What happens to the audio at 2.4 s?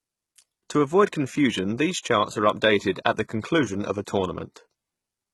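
At 2.4 s the speech carries the same heavy HE-AAC compression damage heard throughout the clip. The treble sounds rebuilt rather than recorded, likely from spectral band replication copying lower bands upward at a very low bitrate near 16 kbps, so sibilants come out gritty and metallic.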